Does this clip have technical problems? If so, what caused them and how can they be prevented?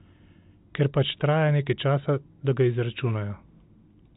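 No, there are no technical problems to prevent here.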